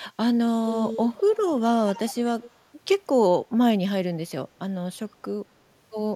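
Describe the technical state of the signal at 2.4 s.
Echo leak at 2.41 to 2.51 s: a faint, delayed copy of the speech returns 211 ms behind it, around 25 dB below the direct signal. This is likely a loudspeaker's output reaching its microphone and escaping the echo canceller before being sent back.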